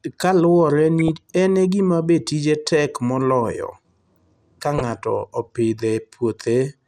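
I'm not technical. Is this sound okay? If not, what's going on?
No, not quite. The whole recording sounds plainly dull and gritty, as if the sharp, bright parts of the voice have been shaved off. That's likely MP2 compression, the squeezing used for digital radio, where too little space leaves the top end missing and the rest rough.

There are also two brief splutters of DAB burbling, at about 0.99 to 1.08 s, just before "en e gima be", and again at 4.78 to 4.89 s. They sound like short blips of noise, the kind of garbling you get when a weak digital radio signal lets errors slip through.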